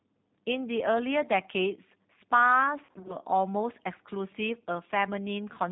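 Speech clip here, and the whole thing has that rough, slightly synthetic G.729 codec sound: nothing above 4 kHz, and a coarse texture that points to 8 kbit/s coding. From about 2.85 to 3.16 s there's VoIP packet loss concealed by the speech codec. Roughly 140 ms of audio went missing in short gaps of up to 40 ms each, and the decoder patched them by stretching its last frame into fading buzzy or noisy bits, leaving things weak and smeared until it recovers.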